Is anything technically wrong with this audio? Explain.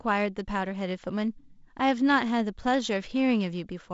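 No, nothing is technically wrong with this audio.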